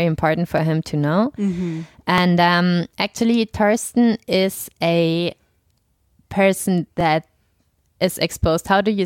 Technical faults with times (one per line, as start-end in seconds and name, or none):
0.58-8.61 clock drift buffer slips